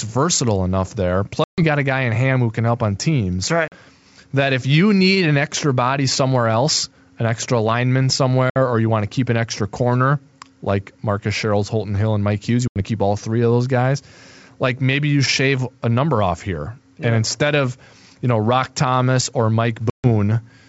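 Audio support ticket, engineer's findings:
Packet loss on the ADPCM call: hard silent gaps at 1.44, 3.68, 8.50, 12.68 and 19.90 s (40–140 ms), then slightly distorted recovery while the decoder's predictor resyncs.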